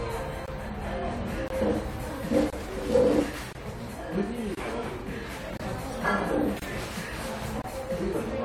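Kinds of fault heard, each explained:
Gap between chunks: The audio was delivered in one-second chunks, and each join received about 23 ms of silence, as if from padding or a late chunk start, while nothing was dropped. The sound breaks off briefly and resumes at 0.46, 1.48, 2.50, 3.53, 4.55, 5.57, 6.60 and 7.62 s. These short holes fall at a steady one-second rhythm through the whole clip.
Frames out of order: Neighbouring runs of frames were decoded in swapped order, so short stretches play with their halves exchanged and no time is lost. From 3.10 to 3.21 s, two blocks of about 46 ms each trade places. From 4.96 to 5.02 s, two blocks of about 23 ms each are swapped. Both spots give a brief garbled flutter.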